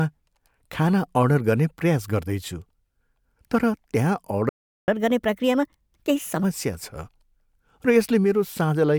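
At 4.49 s the speech cuts to silence for about 0.39 s and resumes at 4.88 s, a playback stall, most likely the player running short of data or its thread being blocked. From 4.88 s to 6.43 s the speech runs fast and high, 1.25 times normal speed and roughly four semitones up: catch-up at higher speed, resampling the backlog to regain lost time.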